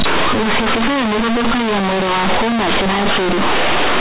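From start to finish, companded audio read as linear: mu-law bytes play as raw 8-bit samples, giving harsh buzzy distortion and loud hiss in pauses, unlike clipping, which leaves quiet passages clean.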